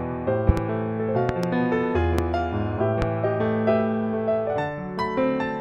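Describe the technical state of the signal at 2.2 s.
A single loud pop sits from 2.19 to 2.22 s, roughly 20 dB above the sound. It is likely a voltage spike, such as a switch or static discharge, added onto the signal.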